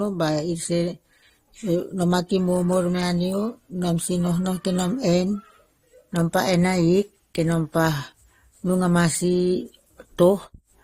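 From start to finish the speech carries transcoding between lossy codecs, with nothing above 18.7 kHz. The texture sounds like AAC artefacts that were likely re-encoded through Opus, both at around 48 kbit/s, so two sets of artefacts pile up.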